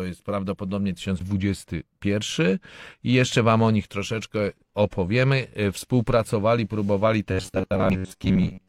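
Right after "jest prawdopodobnie", at 1.16 to 1.21 s, there's a quick glitch: damaged data in the compressed stream, so the decoder lost sync. From 7.32 s to the end the speech turns into a rigid, metallic buzz at 93.8 Hz, likely robotic sound from repeated short buffers, with roughly 11 ms chunks looped over most of that stretch. The damaged data hits again at 7.90 to 7.96 s.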